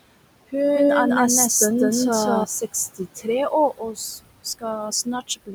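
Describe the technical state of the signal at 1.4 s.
At 1.4 s a doubled audio track is running, from 0.76 to 2.44 s. A second full-band copy of the speech trails by about a fifth of a second at roughly equal level, likely from a slower capture path mixed back in. Unlike an acoustic echo or reverb, it has no decay or room colour, and it starts and stops abruptly.

Noise suppressor artifacts are also present here and throughout. The room noise, about 16 dB below the speech, is pulled down by about 20 dB in the gaps and comes back under the speech. A simple gate would switch on and off cleanly instead of working band by band.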